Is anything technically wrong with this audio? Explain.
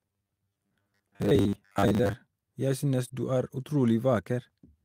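Yes. Three faults can be heard in this speech clip.

From 0.01 to 2.13 s the voice has a robotic sound from repeated short buffers. A rigid metallic buzz sits at 100 Hz. That pitch fits a 10 ms buffer being replayed. The likely cause is new audio arriving too seldom, so the software repeats the last fragment to fill the wait. Roughly half of this stretch is repeated material. The real audio in those moments is skipped.

From 1.41 to 1.59 s there is a lost packet rebuilt from error correction. About 100 ms of audio was lost, which fits five 20 ms packets. Each following packet carried a low-bitrate copy of the missing one, and the decoder played those copies. So there is no gap. The rebuilt section sounds rougher and noisier than the audio around it.

From 3.07 to 3.11 s, just before "du er", there is a short concealed packet loss. About 20 ms of audio never reached the decoder in time. The receiver filled that hole by extending the preceding sound and then blending back into the real signal. 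It is heard as a brief smear. A short sound at that point may be lost.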